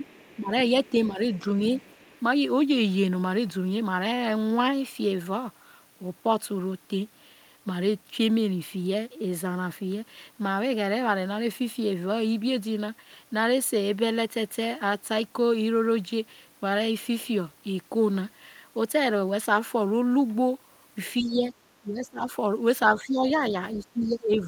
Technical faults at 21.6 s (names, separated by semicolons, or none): speech suppressed in double talk